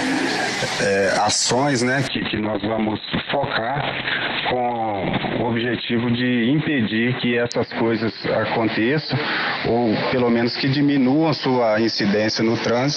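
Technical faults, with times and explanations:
2.08–12.96 s, call bitrate drop: the audio loses its top end and turns rough and watery through to the end of the clip, which fits the encoder falling from around 32 kbps to about 6 kbps after the call's bandwidth estimate collapsed. Starved of bits, it codes coarsely and narrows the band from 20 kHz to 4 kHz, giving the muffled, smeared character, which is worst for about 3.1 s and never recovers.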